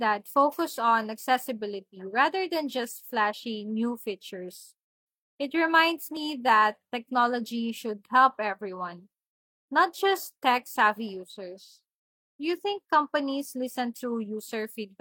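At about 6.17 s, just before "that technology should help", the speech jumps forward: an overlap between stream segments. Two adjacent segments claimed the same 30 ms, and trimming that stretch removed real audio. The timing fits 2-second segments.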